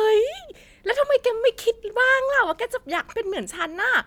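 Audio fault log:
No faults are heard in this speech recording. There is nothing here to log.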